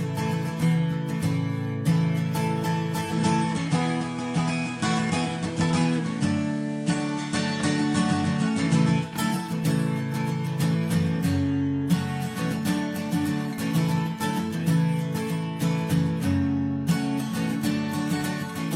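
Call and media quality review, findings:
Digital radio blending to analogue, 2.99–9.18 s: receiver drops to FM with a 0.2 s crossfade each way. Hiss about 30 dB below signal, level shifts about 2 dB.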